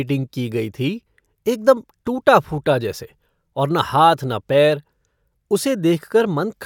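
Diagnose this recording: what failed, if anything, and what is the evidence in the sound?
Nothing failed at any stage of the chain, from wiring through to playback: the speech shows no audible fault, so there is no evidence to cite and no mechanism to diagnose.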